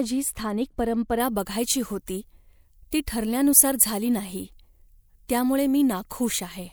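From 1.2 s onward, pre-emphasis is left on because the matching treble cut was never applied. At 10 kHz the boost is about 14 dB, making speech thin and sibilant, with bright upper spectrogram bands.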